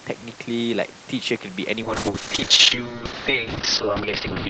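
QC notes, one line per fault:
1.83 s to end: call bitrate drop. The sound turns coarse and rough as the Opus encoder is starved of bits, and the top band narrows from 8 kHz to 6 kHz, dulling it; this points to roughly 40 kbps falling to about 6 kbps, without recovering.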